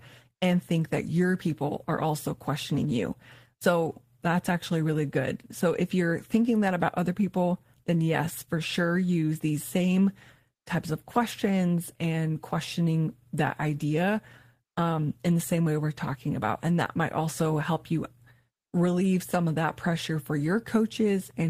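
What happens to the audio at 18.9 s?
Nothing goes wrong at 18.9 s; the speech carries on through that moment with no audible fault.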